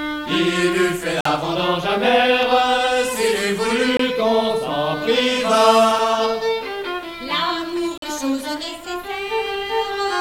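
The audio has four blocks of digital silence: about 46 ms at 1.21 s and 7.98 s, 23 ms at 3.97 s, and a 3 ms tick at 5.99 s. The sizes fit missed 2048-, 1024- and 128-sample buffers. On a waveform each shows as a flat line with abrupt edges, and on a spectrogram as a blank vertical gap.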